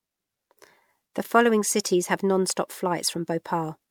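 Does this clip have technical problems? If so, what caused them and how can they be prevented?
Yes, there's generation loss running through the whole speech clip: it's swirly, hollow and smeared, with soft attacks. That's likely from around four rounds of MP3 encoding at 128 kbit/s, each pass adding fresh quantisation noise on a shifted frame grid. Keep a lossless master and encode to MP3 only once, at the very end.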